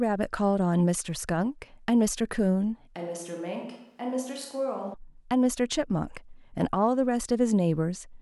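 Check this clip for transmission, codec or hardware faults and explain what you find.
One fault is present in this speech clip. From 2.95 s to 4.94 s the sound abruptly turns roomy and hollow, loses bass, drops by about 10 dB, and carries room noise roughly 40 dB below the speech. This is likely a switch to a distant microphone after the close one dropped out, so the signal reaching the recording includes far more room reflection. A simple gain drop would only lower the level. Here the tone and reverberation change too, and the clip snaps back just as sharply at 4.94 s.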